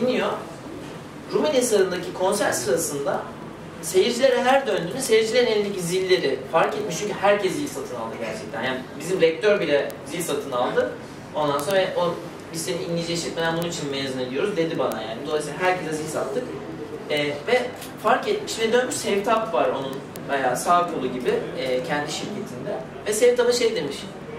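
From 0.15 s onward, sharp ticks recur about twenty times a second: word clock ticks, an unlocked receiver clock slipping single samples.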